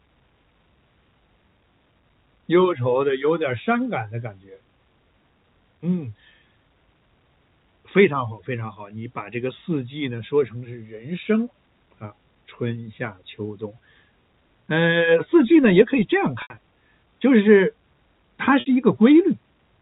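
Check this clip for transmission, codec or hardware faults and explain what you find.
Two brief gaps were concealed by packet loss with pitch repetition, at 16.42 to 16.50 s (80 ms) and 18.60 to 18.66 s (60 ms). For each gap, the receiver looped the last pitch period of the telephone-band audio, producing a briefly held, buzzy tone. A plain dropout would leave silence or a click instead.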